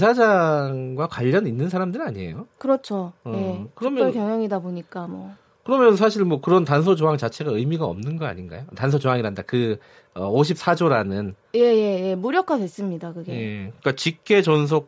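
No technical faults are audible.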